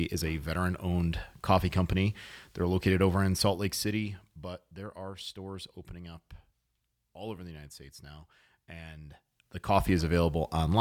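Dropped samples at 10.16 s: a single sharp click stands out near the end of the speech, appearing as a thin vertical line through the spectrum. The likely cause is a tiny gap in the sample stream, a fraction of a millisecond of audio lost, so the waveform leaps straight from one value to a later one instead of moving smoothly between them. The gap is too brief to remove any audible sound; only the step itself is heard.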